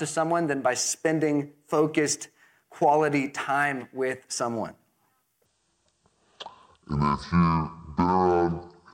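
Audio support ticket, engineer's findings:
Section at the wrong speed, 5.45 s to end of clip. Speech abruptly drops to roughly half speed (0.534x), pitch falling together by about ten semitones: slow, deep, dragged delivery. Speed and pitch locked, so not a pitch-shift effect. Likely cause: playback or edit stage running this section against a mismatched clock, stretching the samples in time.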